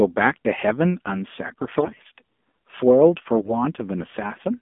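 From the start the whole thing runs through the AMR narrowband mobile codec. The line is squeezed into roughly 200 Hz to 3.5 kHz, and the speech sounds buzzy and synthetic, which fits a low mode around 7.4 kbps. The pulse-driven vocal-tract model is plainly audible.

Then at 1.48 to 2.05 s there's a patch of AMR bit errors, from a weak link flipping the lightly protected bits, maybe seven percent of them. Pitch and loudness roughly hold, but the misplaced excitation pulses and off gain and spectrum values make it hoarse, scratchy and gargly. A shorter, slightly milder burst of the same errors hits at 3.36 to 3.58 s.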